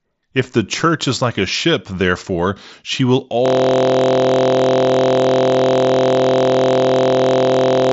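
At 3.46 s, right after "ship therefore she will", a system hang loop takes over and runs to the end: a 23.22 ms slice repeats exactly, giving a steady 43.1 Hz buzz, which fits a 1024-sample ring buffer replaying while the system froze.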